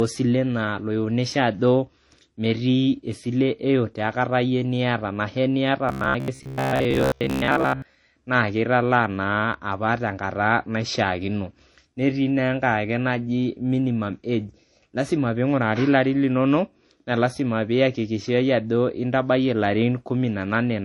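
A speech recording of about 21 seconds carries a smeared, swirly coarseness throughout, with two kinds of compression grit layered on each other. This points to transcoding between lossy codecs, likely a low-bitrate MP3 feeding an HE-AAC stage and then a second MP3 encode near 48 kbit/s. Each later encoder wastes bits re-coding the earlier damage and adds its own, while the lowest bandwidth limit in the chain survives. From 5.89 to 7.94 s the voice turns into a rigid, metallic buzz pinned at 66.7 Hz that only loosely tracks the syllables. This is robotic sound from repeated short buffers. The pitch fits a 15 ms block being looped, and most of the real audio in that stretch is skipped. The likely cause is new audio arriving too seldom, so the player fills the gaps by replaying its last buffer.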